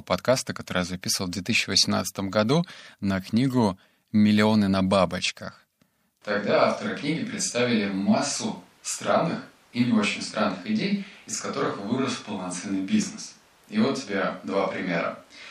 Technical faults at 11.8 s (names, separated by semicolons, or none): switch to a distant microphone